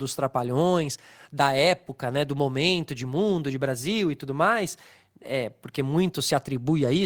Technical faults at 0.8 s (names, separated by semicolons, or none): lost packet rebuilt from error correction